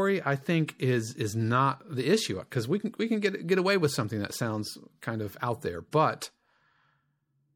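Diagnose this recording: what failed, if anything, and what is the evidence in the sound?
The codec stage is the likely culprit: the speech shows plainly audible MP3 compression from start to finish, and the amount of damage fits a low bitrate of around 64 kbps. With too few bits, the encoder drops weak spectral lines that then flicker between frames. The result is a watery, swirling texture under the speech, chirpy metallic s sounds, and softened consonant attacks.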